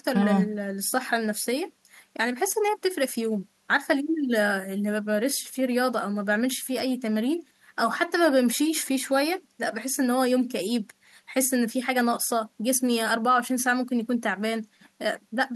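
No technical faults can be heard anywhere in the speech recording. Nothing in it calls for a timestamp or a note on any breakdown.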